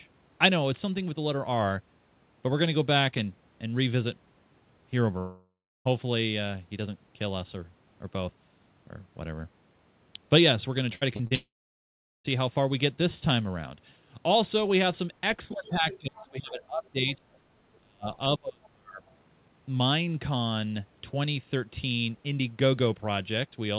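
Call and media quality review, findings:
Long network dropout, 5.18–5.87 s. The last sound is stretched into a fading buzz, then about 0.35 s of near-silence. Audio resumes with roughly 0.68 s lost. Likely cause: a network outage, with the jitter buffer concealing until nothing remains to extend.

Repeated packet loss (robotic sound), 10.95–11.33 s. Four short holes, the longest 60 ms. About a third of the span is patched by repeating the last sound. Choppy texture, likely from bursty packet loss that gives concealment no time to recover.

Second long network dropout, 11.35–12.26 s, right after the robotic stretch. About 0.9 s missing. The filled tail fades fast into roughly 0.78 s of silence. Likely a network outage, long enough to exhaust concealment completely.

Speech suppressed in double talk at 15.52–16.97 s, 17.16–17.25 s, 17.80–18.07 s and 18.38–19.03 s. Level dips and dropouts, about 20 dB in the first two and about 35 dB in the last two. 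Likely cause: the echo canceller ducking both talkers during overlap.

Other side's voice leaking through at 15.91–15.99 s (about 15 dB below the talker), 16.16–16.26 s (about 20 dB below), 16.85–16.89 s and 17.33–17.38 s (both about 40 dB below). Scraps of a second voice. Likely cause: residual loudspeaker echo left by the canceller. Band-limited to 4 kHz by the G.711 path.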